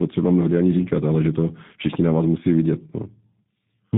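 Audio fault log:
Throughout, tandem speech coding: the speech passes through a chain of differing codecs, likely CVSD, then G.711 mu-law, then G.729A, each recoding the last one's flawed output. Errors stack up. The sound is rough, muffled and warbly, with nothing above 3.8 kHz.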